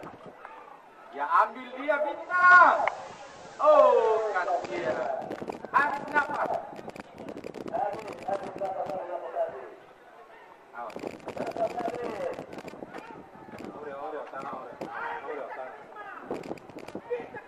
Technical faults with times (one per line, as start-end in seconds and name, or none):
2.14-5.23 digital radio blending to analogue